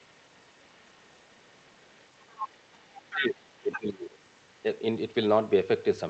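From 1.52 to 2.05 s a very faint second voice sits under the speech. This is the other side's voice leaking through. The likely cause is an echo canceller that left some of the far-end loudspeaker sound in the microphone signal. From 2.21 to 2.57 s the leak is much stronger, only a little below the talker. Brief, very faint scraps follow at 2.73 to 2.78 s. A fairly strong stretch comes back from 2.95 to 3.20 s. A short, clearer fragment returns at 3.72 to 3.80 s.

From 2.88 to 2.96 s the talker dips noticeably. This is speech suppressed in double talk. Both sides were heard at once, and the canceller likely could not separate them, so it turned the talker down too. From 3.13 to 4.11 s the suppression returns much more deeply. The voice sinks well down and thins out in pieces while the leaked voice overlaps it. All of this arrives through the call codec path, with its top end limited near 8 kHz.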